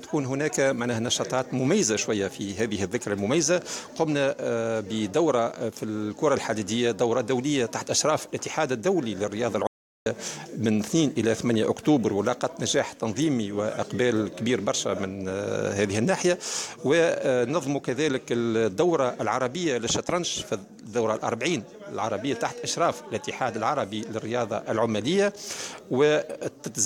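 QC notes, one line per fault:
9.67–10.06 s, audio dropout to silence: sound cuts to silence for 0.39 s with no room tone, likely an input loss while recording continued.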